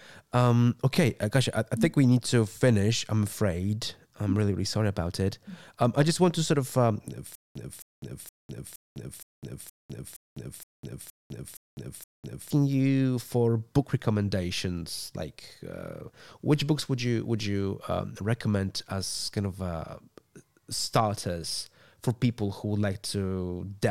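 From 7.35 to 12.50 s the speech breaks into a stutter with silent gaps: a 266 ms fragment repeats 11 times, each followed by about 203 ms of digital silence, a steady 468 ms cycle. This likely comes from a stalled stream replaying its last buffer. Plain dropouts would lose audio without repeating it.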